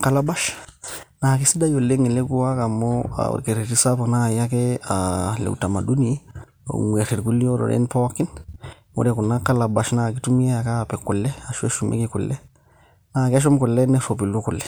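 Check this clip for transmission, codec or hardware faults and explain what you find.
Checking this clip turned up no faults to explain.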